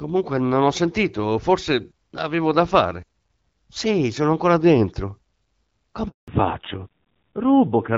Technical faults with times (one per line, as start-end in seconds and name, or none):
6.08-6.28 handover gap
6.28-7.97 fallback to narrowband